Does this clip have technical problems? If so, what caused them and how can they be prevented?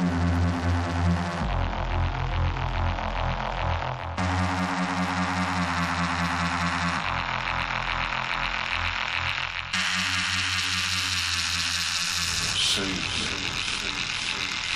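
No, this clip has no technical problems, so nothing caused any and there is nothing to prevent.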